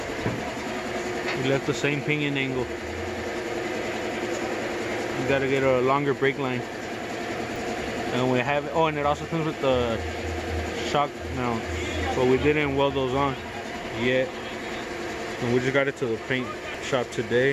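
At 7.56 s and again at 16.75 s the sound makes a small forward jump, a few milliseconds lost the first time and roughly 10 ms the second. Each is likely a dropped buffer (overrun), where unread samples were overwritten and the surrounding audio was spliced directly together.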